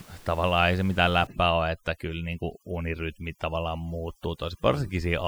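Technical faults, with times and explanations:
1.27–5.27 s, overdone noise removal: a heavy-handed noise reducer, fed room noise sitting about 26 dB below the speech, pushes individual frequency bands down or off near its noise estimate. The background drops and breaks up into twinkling specks, and quiet parts of the speech go with it.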